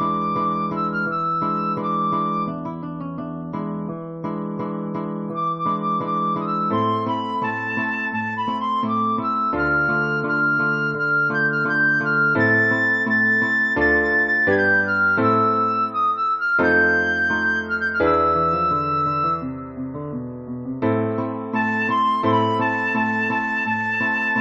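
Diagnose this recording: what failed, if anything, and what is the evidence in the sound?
Nothing in the recording stood out as a failure on careful listening, so there is no evidence to point to at any stage of the chain.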